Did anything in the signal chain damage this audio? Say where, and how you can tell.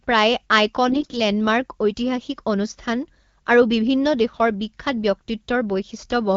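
Yes, on the network link: AMR bit errors at 0.88 to 1.18 s. The voice goes gargly and hoarse as flipped low-priority bits misplace excitation pulses and skew gains.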